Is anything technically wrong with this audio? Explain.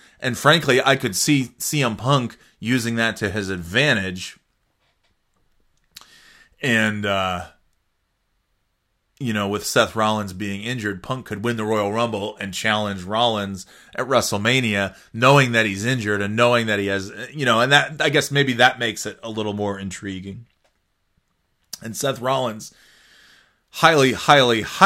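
No, nothing is technically wrong with this audio.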